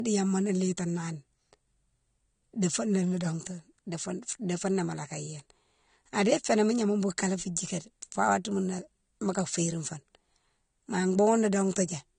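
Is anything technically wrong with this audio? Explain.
Yes. The speech has a hard ceiling throughout. Nothing is present above about 9.7 kHz, so it sounds dull despite coming from a large, high-quality MP3. This is likely low-bitrate audio saved at a high bitrate. An earlier low-rate encode, consistent with something like 32 kbit/s AAC, removed the upper band and left its artefacts. Re-encoding at a generous MP3 rate preserved that damage without restoring anything lost.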